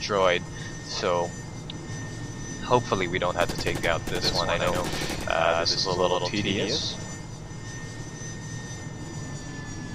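A second copy of the signal, likely captured again through a slower path or left out of step by an edit, produces a doubled audio track from 4.22 s to 7.16 s. During that stretch the audio is heard twice, with a full-band echo trailing roughly a tenth of a second behind and about 5 dB quieter. The repeat carries no decay or room colour, and it appears and vanishes abruptly at those two points.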